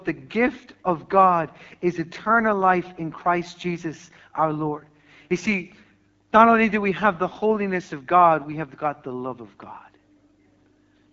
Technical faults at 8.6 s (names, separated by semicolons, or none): AMR wideband (HD Voice) codec